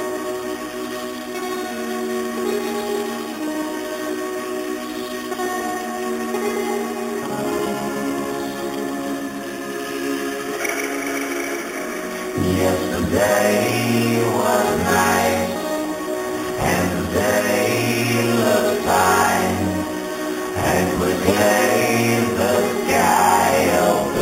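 Imaging from sample-and-hold upsampling runs throughout: the audio was raised from 8 kHz to 48 kHz by repeating each sample six times without smoothing. A spectrogram shows the band below 4 kHz mirrored into 4–8 kHz at about 14 dB down, and the waveform shows stair-steps.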